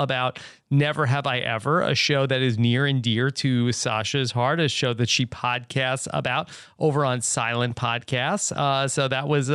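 Speech recording with no audible technical faults in the signal path.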